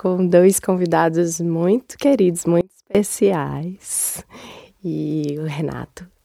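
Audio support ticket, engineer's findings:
Audio dropout to a faint residue, 2.61–2.95 s, roughly 340 ms. Signal cuts abruptly to a faint leak of the programme, around 30 dB below normal level, then returns mid-flow. Not a fade or a pause. Likely cause is a momentary loss of the source feed upstream while the downstream path stays live, passing only residual bleed. Check the source connection and any switching point before the gain stage.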